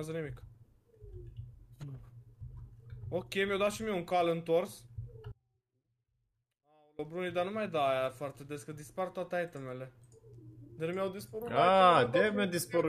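At 5.32 s the sound drops out abruptly, in mid-flow rather than at a pause. This is an audio dropout to a faint residue. For about 1.67 s the wanted signal is gone. Only a faint leak of it remains, roughly 30 dB below its normal level. The path after the break likely stayed live while the source feed was lost. There is no fade at either edge. At 6.99 s the full signal snaps straight back in.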